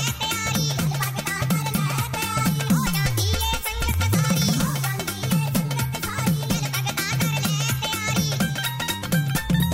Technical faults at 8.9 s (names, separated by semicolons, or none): wrong sample rate